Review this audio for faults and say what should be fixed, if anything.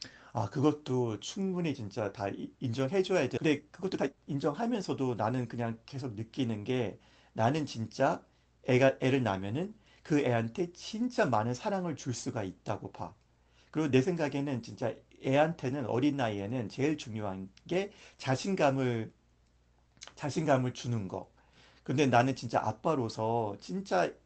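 Skip ahead at 3.37–3.39 s: roughly a second of audio is missing, and the sound on either side of the jump is joined with no fill and no gap. The jitter buffer had built up about a second of extra delay and threw the backlog away in one step, jumping playback straight to later audio that was already waiting. This happens when a burst of late packets overflows the buffer. Prevent it by letting the jitter buffer drain gradually instead of flushing it in one jump.

Jitter buffer speed-up from 3.41 to 5.53 s: the audio runs at about 119% speed with its pitch unchanged, so that stretch sounds hurried. The receiver still held more audio than its target, so it repeatedly cut out short pitch-period-sized pieces, removing roughly 0.4 s in total to bring the delay down. The whole audio comes through an Opus call path with an 8 kHz bandwidth. Prevent it by reducing network jitter and packet bunching so that the buffer doesn't overfill and need to catch up.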